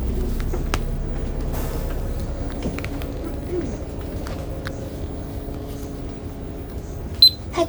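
No technical faults can be heard anywhere in this recording.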